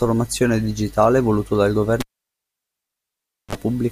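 At 2.00 s, just after "digitale voluto dal", the cable is pulled and plugged in again: a pop, about 1.50 s of near silence while disconnected, then a 39 ms burst of 50 Hz mains buzz as the plug tip makes partial contact, and a second pop when the sound returns at 3.55 s.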